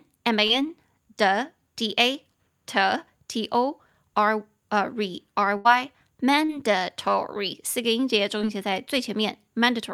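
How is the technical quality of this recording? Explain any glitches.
The recording has four dropouts from packet loss: three short concealed gaps and one longer burst.

Short concealed packet loss occurs at 0.47 to 0.51 s, 6.45 to 6.51 s and 8.38 to 8.41 s. About 20 ms, 40 ms and 20 ms of speech failed to reach the decoder in time. The receiver extended the preceding sound through each hole, from its pitch when voiced or as shaped noise otherwise, then crossfaded back. Each heard as a brief smear or wobble, and a short consonant may drop out.

A burst of packet loss runs from 5.57 to 5.67 s, where about 80 ms went missing in one stretch. The decoder stretched the last sound across the gap, fading it as the gap continued. That produced a held buzz if voiced or a dying hiss if not. The speech then picks up further along, with that slice gone.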